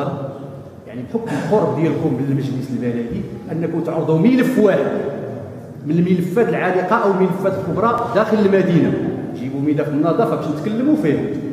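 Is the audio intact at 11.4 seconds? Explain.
Yes, the audio is intact at 11.4 seconds, with no dropout, glitch or other fault at that moment.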